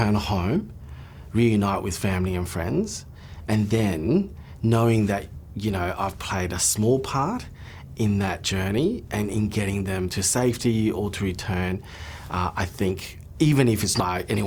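Damaged data in the compressed stream shows up at 14.00 s, close to the end of the audio, as a single brief blip. At that point part of the encoded stream no longer holds what the encoder wrote: bytes have gone missing, been blanked or been overwritten. The decoder cannot read the affected frame correctly, loses its place in the stream and has to hunt for the next valid frame header. That disruption is heard as the short, unnatural blip.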